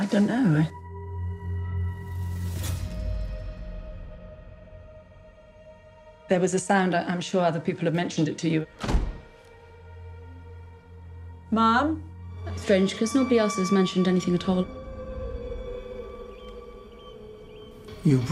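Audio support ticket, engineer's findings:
Listened through the whole clip and found nothing to flag, so there's no fault to log on this ticket.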